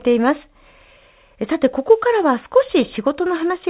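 No technical faults can be heard in this speech clip. It has passed through a WebRTC call path that works as it should, and the band stops at 4 kHz with the coding noise of a telephone-grade codec, which fits 64 kbps G.711 mu-law.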